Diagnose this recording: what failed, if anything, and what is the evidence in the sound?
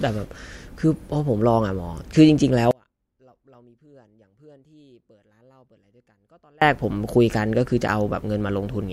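Audio dropout to a faint residue, likely a loose analogue connection. From 2.71 to 6.62 s, speech cuts abruptly to faint leakage about 35 dB down.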